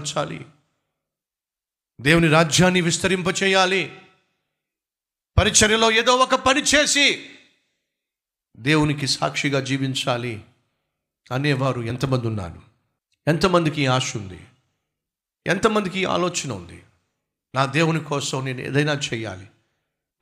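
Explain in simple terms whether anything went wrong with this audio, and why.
One piece of the compressed speech, about a single frame of roughly 23.2 ms, never reached the speaker: it was lost or rejected as damaged. These are compressed frames skipped. At 11.89 s the speech jumps ahead by a moment.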